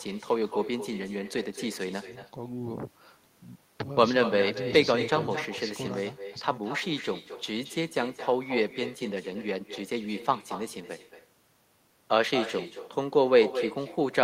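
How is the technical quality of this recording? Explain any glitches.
The main problem is echo with no canceller, running the whole way through. The far end's speaker feeds its mic uncancelled, so every phrase returns about a fifth of a second later, thin, about 11 dB down.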